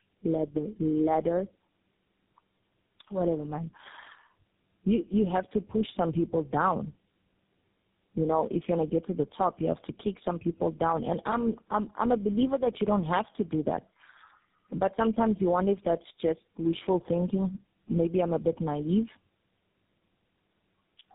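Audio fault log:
Throughout, tandem speech coding: the speech sounds rough, muffled and warbly, with nothing above 3.7 kHz. The coarseness fits three low-rate speech coders in a row, two G.729A stages at 8 kbit/s and a final GSM full rate stage, with G.711 links between them. At each border the speech was decoded and coded again, so every coder worked on the previous one's damage and the errors piled up.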